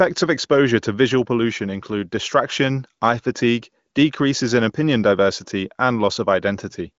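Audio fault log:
Nothing to log here, just speech carried over an AMR wideband (HD Voice) link at what sounds like around 18.25 kbit/s, with the top end stopping near 7.5 kHz as that kind of call audio does.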